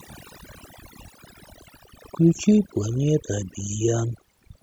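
Overdone noise removal runs throughout the speech. Bands near the noise estimate are cut hard. The background turns to twinkling near-silence.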